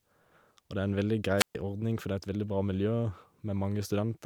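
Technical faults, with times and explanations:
1.37–1.55 s, wireless microphone squelch dropout: after "det er en veldig" the radio signal fades, hiss rises briefly, then the receiver's squelch mutes the output for about 130 ms before "ordning for" returns. The static swelling into the gap distinguishes it from a clean digital dropout.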